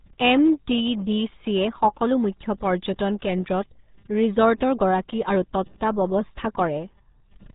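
Speech throughout carries heavy RealAudio 14.4 codec damage: muffled, gargly, pointing to an 8 kbit/s stream, with the spectrogram showing nothing above 3.8 kHz.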